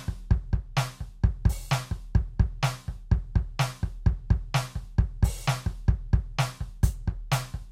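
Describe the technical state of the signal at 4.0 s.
At 4.0 s the music plays through intact, with no dropout, clipping, glitch or other fault audible at that moment.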